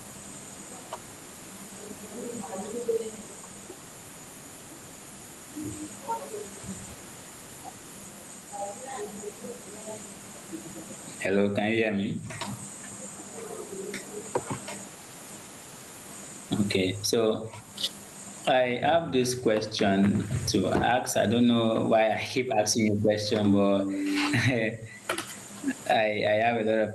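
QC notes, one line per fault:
throughout, gain pumping: loud and soft parts end up closer in level, a swing of around 20 dB, likely from gain set far too high with a fast limiter clamping it. Waveform peaks look flattened.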